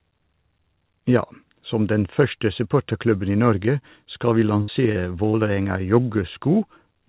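Speech carried over a narrowband call link, with nothing above 4 kHz, consistent with G.711 mu-law telephony coding. Just after "skal vi", a burst of packet loss at 4.62 to 4.70 s drops about 60 ms of audio. The receiver stretches and fades the last sound across the gap, producing a held buzz or hiss before speech resumes further on. Two short concealed packet losses follow at 4.92 to 4.97 s and 5.29 to 5.35 s, each about 40 ms, filled by extrapolation and then cross-faded back, heard as brief smears or wobbles.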